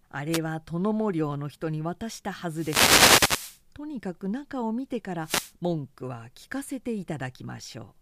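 Wireless microphone noise hits break into this speech at 0.32 to 0.39 s, 2.49 to 3.62 s and 5.21 to 5.53 s: the analogue FM radio link fades as reflected signals cancel, letting receiver noise surge up as swishing static.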